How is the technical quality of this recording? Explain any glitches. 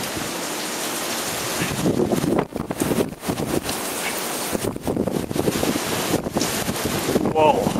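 Quality is compromised by one fault. From 2.28 to 6.57 s a call bitrate drop coarsens the encoding, consistent with roughly 96 falling to 26 kbps; the sound turns muffled and watery, worst for about 2.2 s.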